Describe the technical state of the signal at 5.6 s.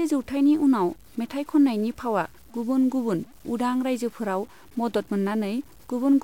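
At 5.6 s the speech carries low bit depth without dither, present across the whole clip. The grain sits roughly 30 dB below the signal and moves with it. Quiet parts turn rough and sputtery. That likely comes from truncation to about 7 bits.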